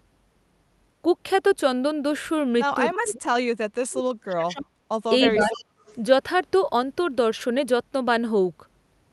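A speech recording in which the voice sinks sharply, close to silence, from 2.98 to 3.29 s and from 3.76 to 4.73 s, then dips more gently, by about 10 dB, from 5.24 to 5.54 s. This is likely speech suppressed in double talk, with the echo canceller ducking this talker while the far side spoke. Copies of the voice trail about 0.3 s behind at 5.26 to 5.30 s, 5.52 to 5.65 s and 5.86 to 5.95 s, roughly 10 dB down and about 30 dB down for the last. That is likely an echo leak from a loudspeaker the canceller didn't fully clear.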